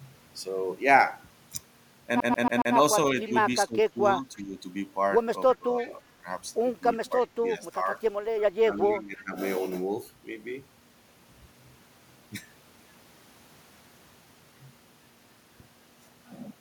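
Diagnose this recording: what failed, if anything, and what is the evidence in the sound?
The first fault is CD stuck on one turn, at the playback stage from disc. From 2.20 to 2.76 s the same 0.14 s slice of speech plays four times in a row, each pass ending in a brief mute before the jump back. The laser is being thrown back one track at the same point on every rotation. Network packet repeats would vary in length and be smoothed over. Here the period is rigidly even and each loop is an exact copy.

The second fault is an echo leak in call processing. A faint second copy of the speech trails the original by a steady 0.33 s, at 3.26 to 3.32 s, 4.37 to 4.43 s, 5.54 to 5.90 s and 7.05 to 7.27 s. Its level is about 25, 30, 20 and 30 dB below the speech. This is likely the far end's echo canceller letting loudspeaker pickup slip through. Room reverberation decays smoothly. This is a discrete delayed repeat in scraps, always at the same lag.

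The third fault is speech suppressed in double talk, also in call processing. The speech dips by about 10 dB at 3.65 to 4.58 s, 7.32 to 7.89 s and 8.67 to 9.36 s, and by about 15 dB at 5.57 to 6.25 s. In each stretch it is pulled down piecemeal for roughly a third to half a second in total. Two of the dips overlap echo bursts, so it is likely an echo canceller attenuating everything while both sides are active. Plain dropouts would go fully silent, and automatic gain would ride slowly. These dips are partial, choppy and tied to the overlaps.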